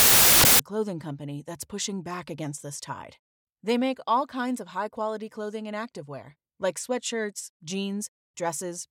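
From 0.0 to 0.59 s, just before "a clothing company that's", samples built from the wrong bytes turn the speech into loud, harsh broadband noise. Unlike added hiss, it follows the audio.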